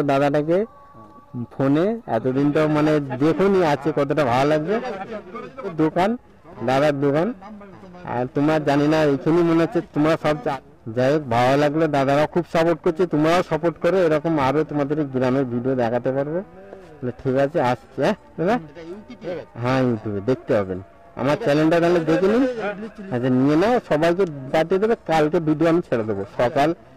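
From about 2.31 s right through to the end, the audio picks up a rough, metallic edge: that's periodic clock jitter. The converter clock is being wobbled at around 1 kHz, so every component grows sidebands that far either side, harshest up top.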